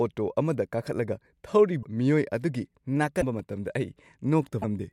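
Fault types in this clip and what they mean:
Broken MP3 bit reservoir: Three brief glitches of about 30 ms each, near 1.82, 3.20 and 4.61 s, each where the speech skips ahead. The likely cause is frames lost from the stream, so the next 26.1 ms frame reads borrowed reservoir bytes from the wrong frame.
Repeated buffer: At 3.39 s the playback device ran short of new data and replayed its last block once. The block is only about 1.3 ms long, which fits a 64-sample buffer, so the repeat is heard as a click or brief buzz rather than a stutter.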